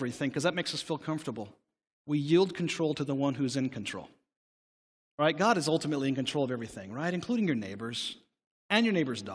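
No technical faults are audible anywhere in this speech recording.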